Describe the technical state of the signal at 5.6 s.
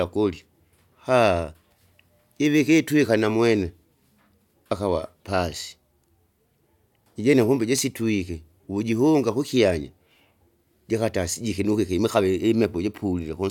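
At 5.6 s the speech signal is intact, with no dropout, clipping, distortion or other fault audible at that moment.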